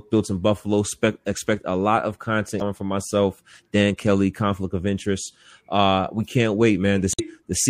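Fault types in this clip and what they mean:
MP3 compression: The speech was likely passed through an MP3 encoder at a low bitrate, around 64 kbps by the sound, which starves weak frequency lines of bits. The high detail flickers and swirls with a plainly watery quality throughout.
Damaged data in a compressed stream: Parts of the encoded stream are corrupted, so the decoder misreads frames and loses sync while hunting for the next valid header. Each break comes through as a brief chirp or blip, at 2.58 to 2.62 s and 7.12 to 7.20 s.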